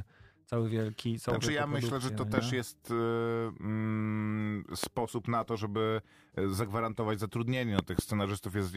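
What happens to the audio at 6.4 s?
Nothing goes wrong at 6.4 s; the speech continues intact through that moment with no audible fault.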